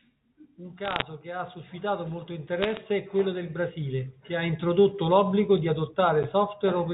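Italian speech over a telephone line, band-limited in a way that fits G.711 mu-law coding. Bit errors on the digital phone line cause bursts of sharp ticks. The first burst runs from 0.84 to 1.02 s, just before "che ha suscitato molto". The second runs from 2.63 to 2.77 s, between "che ha suscitato molto" and "è quello del". Each flipped bit corrupts a single sample. The crackle suggests around half a percent of bits were hit.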